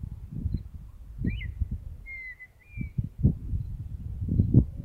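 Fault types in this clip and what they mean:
No faults are audible.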